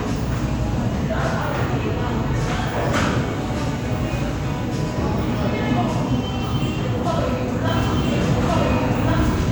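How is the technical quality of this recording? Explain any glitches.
There's one clear glitch, near the end. From 7.68 s right to the end, you get a doubled audio track: a second, equally loud copy of the sound kicks in abruptly, trailing about a second and a half behind. It's dry, with no decay or room tone, so it's likely an edit or a slower capture path layering two out-of-step copies.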